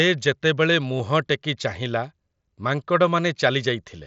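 A speech clip with a brief buzzy smear at about 0.98 s, as the waveform is patched over roughly 15 ms, which fits two lost frames. This is concealed Bluetooth headset packet loss, heard through the mSBC headset codec's 8 kHz-limited band.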